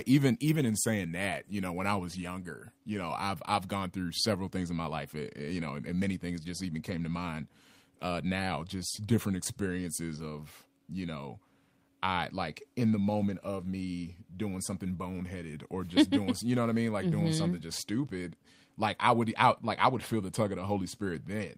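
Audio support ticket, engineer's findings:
No fault found on listening; signal path behaves as expected, nothing to escalate.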